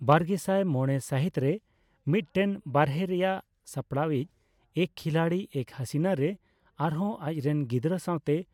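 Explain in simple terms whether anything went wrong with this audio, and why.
Nothing went wrong here: the speech recording has no audible technical faults anywhere.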